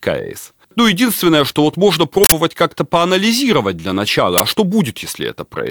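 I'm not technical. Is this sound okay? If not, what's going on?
No. In this speech there are two glitches, a short burst of harsh digital noise and a loud crack, an uninitialised buffer glitch. The player grabbed a chunk of memory before the real audio was written into it, so leftover junk got played as sound. The first, at 2.24–2.32 s, follows "единственное что вот можно"; the second, at 4.38–4.40 s, sits between "поанализировать для начала" and "а что".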